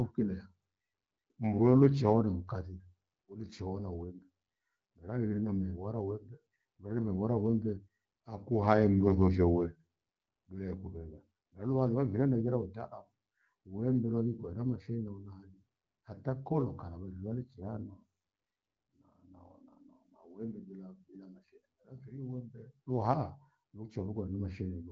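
No technical faults can be heard anywhere in the recording. The speech has passed through an AMR wideband (HD Voice) codec at 12.65 kbit/s, which leaves it band-limited to about 7 kHz with only light coding artefacts.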